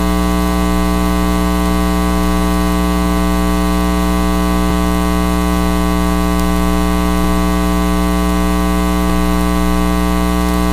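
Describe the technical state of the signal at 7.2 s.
A dropped buffer (overrun) at 7.24 s, likely samples overwritten before being read, removes about 10 ms of audio, heard as a jump.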